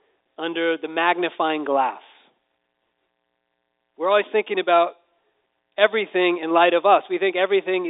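No faults are audible anywhere in this speech.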